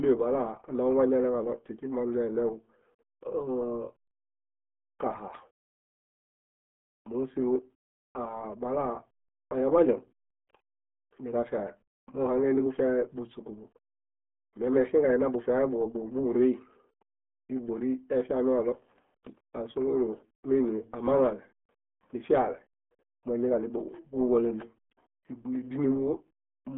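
The whole clip carries RealAudio 14.4 codec damage. The speech sits in a narrow 200 Hz to 3.4 kHz band, with nothing above 3.7 kHz. Heavy coding makes it muffled and gargly. The sound fits an 8 kbit/s dial-up speech codec.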